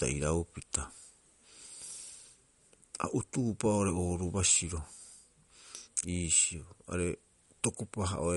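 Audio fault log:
throughout, MP3 compression: the speech has a watery, swirling texture, with metallic chirps on s sounds and softened consonant attacks, and nothing is heard above about 11.2 kHz. This is likely low-bitrate MP3 encoding, around 48 kbps, cutting the treble and letting weak frequency components flicker between frames.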